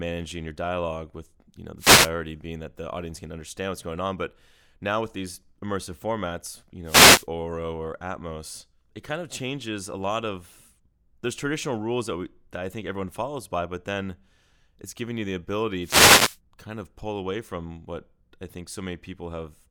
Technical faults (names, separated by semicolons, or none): wireless microphone noise hit